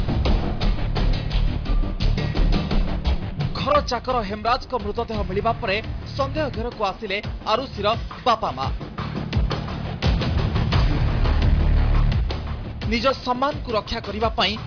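Nothing stood out on listening to the recording.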